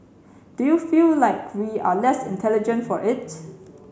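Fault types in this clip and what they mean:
None found; no audible technical defects anywhere in the speech.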